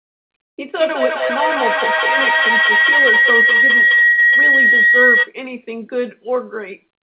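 From 0.78 to 5.35 s a feedback howl builds under the speech: a tone around 2 kHz that swells instead of dying away, peaking about 7 dB above the talker. Sound from a loudspeaker is reaching a microphone on the same call and returning with more gain each trip, so the loop settles on the frequency it favours. Unlike an ordinary echo, whose repeats fade, this one grows, pulsing roughly five times a second as each lap of the loop adds another layer.

Early in the howl, at 1.28 to 1.31 s, there is a short concealed packet loss. About 20 ms of audio never arrived, and the decoder patched the hole by stretching the preceding sound before blending back into the real signal. It is heard as a brief smear or wobble rather than a gap. What sets it apart from a dropout is that nothing goes silent: the continuation hides the loss.

At 4.07 to 4.19 s a burst of packet loss removes about 100 ms. The receiver fills the whole span with a continuation of the last sound, fading it as it goes, so the audio turns into a held buzz or dwindling hiss before it jumps forward. 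Where the short loss is a blink, this is long enough to hear as a frozen sound, and the stretch of speech it covered is missing. Throughout, the audio stops at 4 kHz, which fits narrowband G.711 mu-law at 64 kbps.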